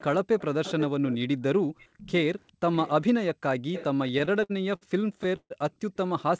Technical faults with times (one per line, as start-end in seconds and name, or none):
0.24-1.17 echo leak
1.78-2.11 echo leak
2.40-2.90 echo leak
3.73-3.84 echo leak
4.08-4.83 repeated stalls (stutter)
5.36-5.52 call audio freeze